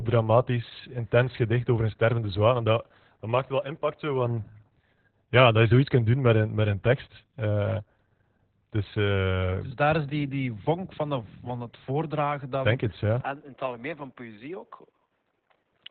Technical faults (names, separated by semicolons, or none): Opus voice compression; input switched to a poorer device